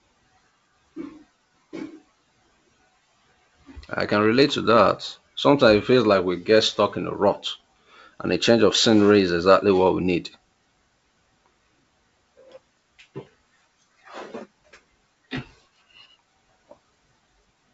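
Nothing technically wrong can be heard in this speech recording. It comes through G.722 wideband telephone coding at 64 kbit/s, which keeps the sound clear up to about 7 kHz, with at most a faint trace of that coding.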